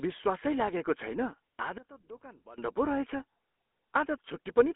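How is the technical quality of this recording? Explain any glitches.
The recording is poor: heavy telephone-codec coloration runs through the whole clip, and the speech briefly collapses in level near the middle.

Throughout, the GSM full-rate codec gives the speech a buzzy, gravelly roughness, consistent with a 13 kbps telephone channel. The vocal tract is modelled and driven by coarse, decimated pulse excitation. A spectrogram shows energy confined to roughly 250 Hz to 3.4 kHz, blank above 3.8 kHz.

From 1.78 to 2.58 s, the speech drops by about 21 dB to a faint copy, likely from one channel inverted: reversed polarity cancels the centred content when summed to mono. The waveform shows a sudden, sharply shrunken stretch between those times.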